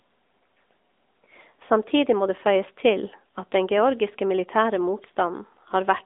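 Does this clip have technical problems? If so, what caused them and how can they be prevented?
Yes. AMR narrowband mobile codec, throughout: the speech is squeezed into a 250 Hz to 3.6 kHz line band, nothing above 3.8 kHz, with plainly audible buzzy synthetic coding, which fits roughly 10.2 kbps. Prevent it by recording locally or using a wideband path instead of a narrowband mobile call.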